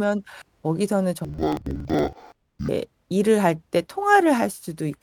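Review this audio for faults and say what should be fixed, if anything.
From 1.25 s to 2.69 s, interleaved audio is read as planar: each 46.4 ms block, which fits a 2048-sample buffer, is split into halves taken as left and right, so both play at half speed. The speech drops an octave, sounds doubled and chops at 21.5 Hz.

To prevent this, make the reader check the declared sample layout and de-interleave alternating left-right samples before treating them as separate channels.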